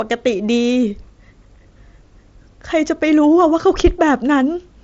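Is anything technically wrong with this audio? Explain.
No, nothing is technically wrong with this audio.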